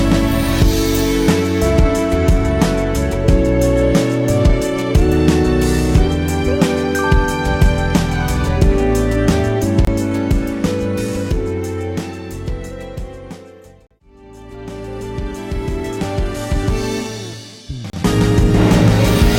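Segment time stamps at three 2 s stream boundaries leave small gaps, so the player inserts silence: hard-edged holes at 9.85 s (about 25 ms), 13.87 s (about 39 ms) and 17.90 s (about 33 ms) interrupt the sound. These are gaps between stream segments, and no audio is lost.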